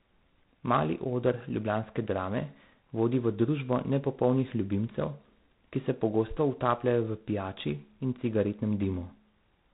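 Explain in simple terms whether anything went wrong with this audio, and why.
G.726 ADPCM coding damage runs through the whole clip, start to finish. Each sample is stored as a small guess of how the sound changes, so errors in those guesses add a rough hiss that rises with the speech, and everything above about 3.9 kHz is missing.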